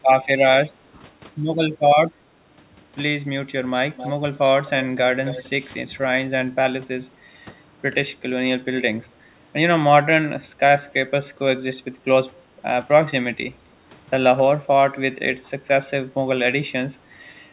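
At 3.97 to 4.11 s and again at 5.25 to 5.44 s, a faint delayed copy of the speech trails the original by 264 ms, well below the main level. This is likely an echo leak, where a far-end echo canceller failed to remove loudspeaker sound picked up by its microphone. The fixed delay and its repetition set it apart from room reverberation.

From 9.03 to 9.18 s the background gated by the echo canceller dips by about 11 dB for a brief moment, then returns. The canceller clamped the microphone while the loudspeaker played. The room sound returns when the canceller lets go.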